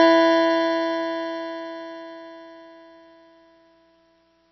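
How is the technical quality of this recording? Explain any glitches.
The technical quality is poor. MP3 compression damage runs through the whole music clip and is plainly audible. Nothing is heard above 5.9 kHz, so the top end sounds dull and closed in. That hard ceiling is likely an encoder starved of bits, which points to a very low bitrate, around 24 kbps. With so few bits, weak frequency lines drop in and out between frames. The result is a watery, swirling texture, metallic chirps on bright sounds, and smeared attacks.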